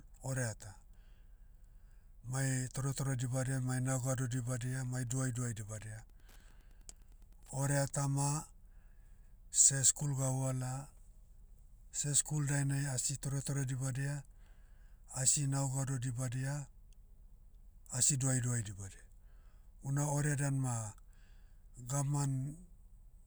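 From 3.05 to 7.96 s, the audio circuit rectifies a nearby Wi-Fi radio's beacon, so Wi-Fi interference ticks faintly every 102.4 ms beneath the speech.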